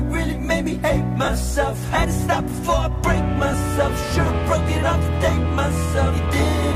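Lost LE Audio frames cause dropouts at 1.25 to 1.28 s, 3.52 to 3.54 s, and 6.29 s. The decoder patches each gap with a scrambled copy of the preceding spectrum. Each one sounds like a brief noisy smear.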